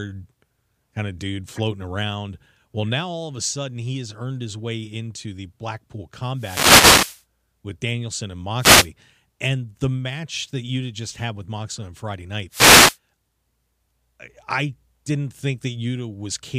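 Wireless microphone noise hits occur at 6.35 to 7.24 s, 8.58 to 8.90 s and 12.50 to 12.98 s. Each is a dropout in the radio link of an analogue FM microphone, where reflected copies of the signal cancel the direct one at the receiver. As the received signal sinks, receiver noise swells into a swish of static over the speech.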